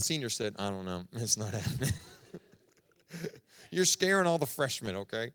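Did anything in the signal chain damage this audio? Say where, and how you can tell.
Yes. Clock drift between sender and receiver runs throughout: the sender's clock is a few percent slow, so the receiver's jitter buffer keeps draining and needing correction at the network stage.

Repeated timing corrections from 0.45 to 5.35 s leave the speech at 98% speed. The receiver stretches short pieces, adding roughly a tenth of a second overall.

Scattered short gaps between 1.98 and 3.24 s come from about five lost or late packets, each very brief. Concealment continued the preceding sound, leaving brief ticks and smears in the speech.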